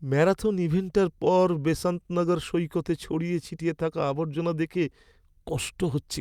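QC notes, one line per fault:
No technical faults detected.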